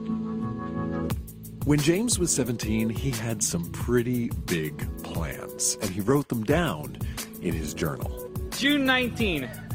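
From 5.86 s to the end of the clip, a call bitrate drop sets in: the call's bandwidth estimate fell and the encoder was pushed onto a much smaller bit budget, with the coarseness pointing to a fall from around 32 kbps to roughly 18 kbps. With fewer bits to spend, detail is quantised more crudely, so the sound turns rougher and more smeared, staying at its worst for about 3.1 s and never recovering before the clip ends.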